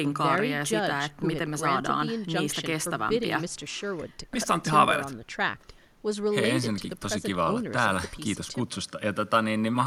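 Nothing here stands out as a technical problem; it's a speech recording, and I can't hear any fault at any point in it.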